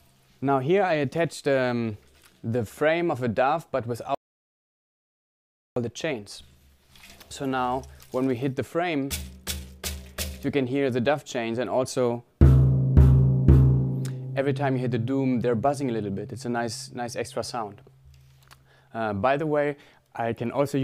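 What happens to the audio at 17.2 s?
Around 17.2 s the audio plays through intact, with no dropout, click, distortion or other audible fault at that point.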